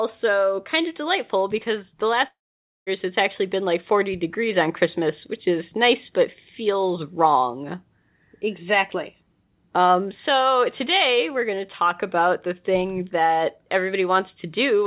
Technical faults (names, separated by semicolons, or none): long network dropout